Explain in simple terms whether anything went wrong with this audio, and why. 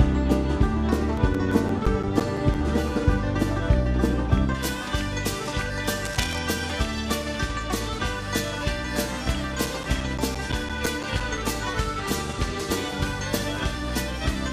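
From the start to about 4.5 s the sound is dull and muffled, as if a blanket covered the treble. This is de-emphasis applied wrongly: a treble cut meant to undo a matching boost was used on audio that never had that boost, or was applied twice, so the highs were lost.

Between 1.17 and 3.05 s, and again between 9.49 and 11.54 s, there is a run of small, regular ticks, about six a second, each a tiny blip or gap. These are CD scratch ticks: a scratch spoils some data once per turn of the disc, and the player can only patch over it.

From 6.05 to 6.39 s a brief scratchy, rustling noise sits over the sound. This is cable scratch noise, likely from a worn cable or connector being moved, so the electrical contact flickered and added crackle.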